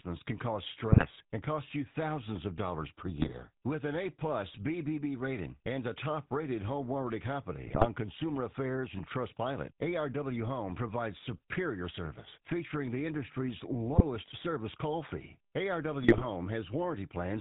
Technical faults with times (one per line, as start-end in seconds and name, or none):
0.00-17.41 GSM full-rate codec
0.92-1.06 GSM bit errors
3.08-3.35 GSM bit errors
7.64-7.86 GSM bit errors
13.91-14.02 GSM bit errors
16.02-16.25 GSM bit errors